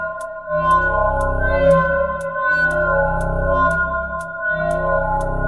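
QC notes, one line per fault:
No faults heard anywhere in this clip.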